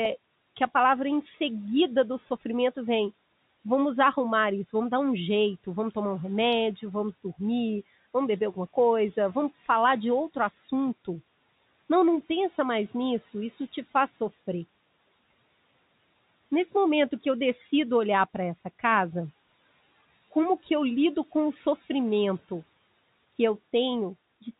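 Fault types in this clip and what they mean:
Speech cut by the noise suppressor: the suppressor mistook brief bits of speech for background and turned them down, by about 7 dB near 10.5 s and about 8 dB near 21.8 s. Unlike a dropout, the sound fades rather than vanishing, so syllables seem swallowed.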